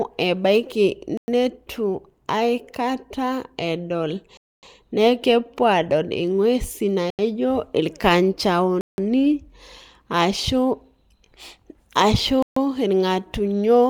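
Five abrupt holes break the speech, each cutting out and back with no fade: at 1.17 s (about 106 ms), at 4.37 s after "aikata edol" (256 ms, before "nekepuo adol ing'uesi"), at 7.10 s after "edol nekepuo adol ing'uesi" (85 ms), at 8.81 s (171 ms), and at 12.43 s (140 ms). Each is a block of digital silence, where whole blocks of output were zeroed, probably because the buffer went unfilled in time. The 85 ms and 171 ms gaps fit 4096- and 8192-sample blocks.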